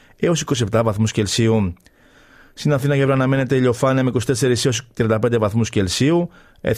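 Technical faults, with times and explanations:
No technical faults are audible anywhere in this speech recording.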